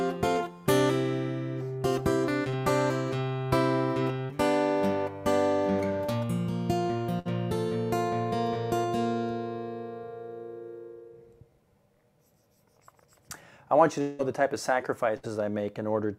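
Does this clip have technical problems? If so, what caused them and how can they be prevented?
Yes. At 2.49 to 2.55 s there is short concealed packet loss. About 40 ms of audio never arrived, and the receiver covered it with 32 ms of continued sound before blending back. The result is a brief smear rather than a held tone, which separates it from the longer bursts. A jitter buffer with a little more depth, or forward error correction, would recover such single losses.

Bursts of packet loss occur at 4.25 to 4.31 s, 7.19 to 7.27 s and 15.17 to 15.25 s. Each time, 40 to 60 ms went missing in a row. The gap was filled with 46 to 65 ms of the last sound continued and fading, so each one is an audible held buzz or hiss, and the audio then resumes further on. Redundant packet coding or a more stable network path would prevent these.

From 14.01 to 14.21 s there is a stretch that is most likely a long network dropout. 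About 180 ms of audio is absent, and 175 ms of fading continuation fills it. It never decays into silence, but it lasts far longer than the bursts before the sound jumps ahead. A wired or less congested connection would avoid such interruptions.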